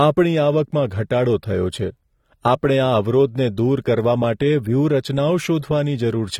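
Right through the speech there's plainly audible codec damage, and the spectrum stops dead at about 19.2 kHz. That's likely AAC compression, specifically AAC-LC, and the amount of damage fits a low bitrate around 32 kbps, too few bits to code the sound cleanly.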